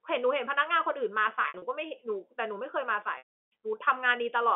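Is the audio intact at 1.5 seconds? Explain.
No, packet loss with pitch repetition hits 1.42 to 1.62 s: about 120 ms of gaps are bridged by repeating the last pitch period, giving brief buzzy, held fragments.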